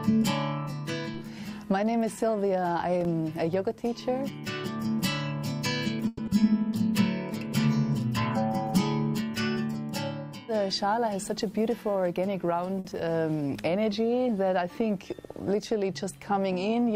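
Packets were likely held up in transit so the jitter buffer ran dry, producing a call audio freeze from 6.07 to 6.20 s: the last sound is carried on as a fading buzz or hiss for about 110 ms, then the audio resumes where it stopped, so a gap is inserted and nothing is lost. Just after, at 6.26 to 6.29 s, a short concealed packet loss occurs: 40 ms never reached the decoder, only 10 ms of it is bridged by extending the previous sound, and the listener hears a brief smear while the delay drops by roughly 30 ms. From 11.04 to 12.30 s a jitter buffer speed-up trims the backlog by repeatedly cutting pitch-period-sized slices, removing roughly a tenth of a second, so the sound plays at 108% speed with unchanged pitch and feels rushed. At 12.80 to 12.87 s a late packet causes a short stall: the buffer empties, the last sound is stretched by 50 ms with a slight buzz or dip, and playback continues from the same point without losing anything. 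Finally, at 12.91 to 12.94 s, another short concealed packet loss drops 20 ms, with only 10 ms filled, leaving a quick smear or wobble.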